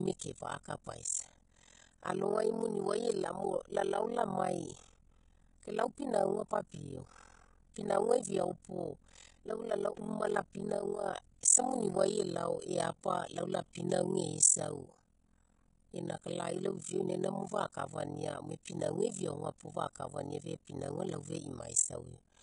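Right from the start the whole speech track has that hissy, grainy quality you get from heavy Vorbis compression, which is likely what happened here. The high-frequency cut-off has been pulled down, and the treble that survives has been quantised so coarsely that the fine detail turns into a noise-like fizz. Tones sound roughened and attacks soft. That degree of damage fits a low bitrate, something around 28 kbps.

Running through the entire clip as well is overlap-add ripple. The audio was chopped into windowed frames and stitched back together with an overlap that doesn't sum to a flat gain, so the level dips and swells once per frame. Here the swing is huge, about 60 dB, at a rate of around 40 Hz, which is why everything has that fast flutter or rough tremolo, almost like it's being gated in fast pulses.

Then at 0.63 s there's a pre-echo. A sharp attack lands late in a transform block, and because the codec spreads its quantisation noise across the whole block, the noise meant for the loud onset also leaks into the quiet stretch just before it, about 18 ms ahead. 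You hear a brief smear of hiss right before the attack, and the onset itself loses its snap.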